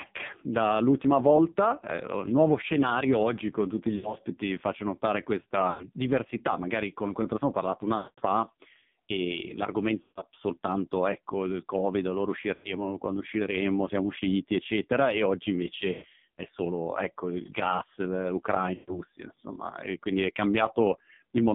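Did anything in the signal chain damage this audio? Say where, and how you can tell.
Yes. The AMR narrowband mobile codec damages the whole clip at the codec stage. The speech sits in a 150 Hz to 3.6 kHz band and sounds heavily buzzy and synthetic, which fits a low rate around 5.9 kbps.

Lost AMR speech frames, a network fault, occur at 3.96, 5.70, 7.98, 10.02, 12.54, 15.92 and 18.74 s. At each one the decoder stretches the last sound and fades it over 80 to 200 ms.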